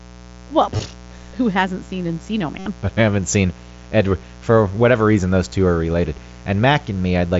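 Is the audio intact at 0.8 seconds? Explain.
No, not quite. Right around there, from 0.77 to 0.79 s, just before "who hasn't seen", there's concealed Bluetooth headset packet loss. About 22 ms of audio between headset and phone went missing, and the receiver papered over the gap by replaying the best-matching bit of the preceding waveform. You get a brief buzzy, held tone with a small warble as the real speech comes back.

On top of that, the 60 Hz mains buzz that runs through the whole clip is there at 0.8 s too. Switching spikes twice per mains cycle throw harmonics well up into the kilohertz range, so it comes across as a steady, raspy buzz sitting roughly 20 dB under the speech.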